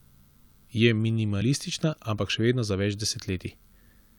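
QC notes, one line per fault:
1.41 s, compressed frames skipped: one 23.2 ms frame missing, so the audio jumps ahead by about 20 ms.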